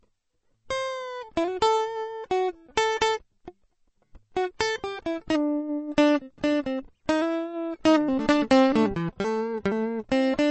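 Throughout the music, a low-bitrate encode, likely MP3 compression at a rate that fits roughly 32 kbps, has starved the encoder of bits. Nothing survives above 8.3 kHz, so the treble is dull, and plainly audible watery swirling and smeared attacks run through every passage.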